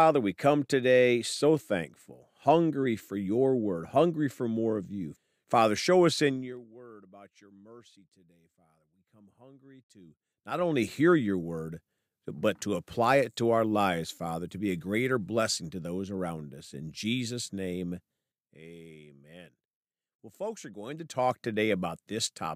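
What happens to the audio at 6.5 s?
Right around there you're hearing zipper noise, running from about 6.27 to 6.66 s. The level gets pulled down by roughly 25 dB, but instead of gliding it drops in hard 1 dB steps, at something like 40 steps a second, with no smoothing between them. Every step leaves a tiny click, so while the speech fades you get that fast ticking, zippery texture riding on top of it.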